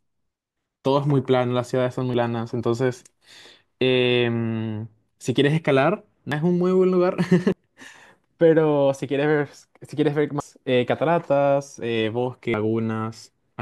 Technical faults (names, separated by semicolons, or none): dropped buffer (overrun)